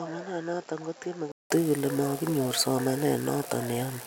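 From the start to 1.50 s the speech is band-limited, with nothing above 7.6 kHz, about 10 dB quieter than what follows, and carrying a faint noise floor roughly 55 dB down. It sounds duller and more boxed-in than the rest. At 1.50 s the audio clears after a 187 ms silence at the switch, which points to the input likely having been switched to a poorer device and then back to the normal microphone.

At 1.03 s a block of digital silence lasting about 4 ms drops out of the speech. A run of samples went to zero, which fits the output buffer not being filled in time. Because the signal cuts to zero and back without any fade, both edges produce an abrupt step, and the short gap is heard as a tick or dip rather than as an audible hole.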